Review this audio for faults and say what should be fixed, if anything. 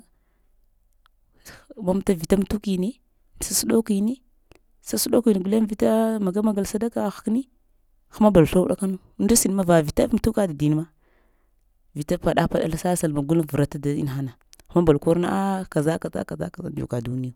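Nothing stood out on listening to this speech recording, so there is nothing here that needs fixing.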